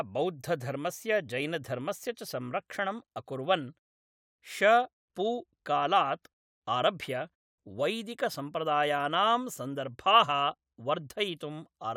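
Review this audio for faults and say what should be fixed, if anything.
Nothing needs fixing in this speech recording: the signal holds steady throughout, with the background dropping to silence in the gaps between phrases and returning in time for each phrase, so no speech is lost.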